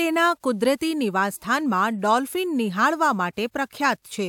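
No technical faults can be heard anywhere in the speech. No dropouts, clicks, distortion, pitch or timing problems occur at any point.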